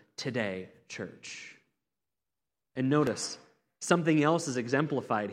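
At 3.07 s the speech has a repeated buffer. Fresh audio arrived late, so the device replayed its last block once more. That block lasts about 1.5 ms, which fits a 64-sample buffer. A piece this short does not stutter. It is heard as a click or brief buzz.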